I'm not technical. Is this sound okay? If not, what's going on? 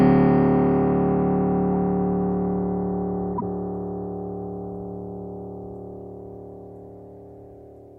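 No. From about 3.33 s to 3.43 s, a brief squeak or burst of noise breaks into the music. This is a corrupt frame decoded. A few small chunks of the compressed file got damaged, and the player played them anyway.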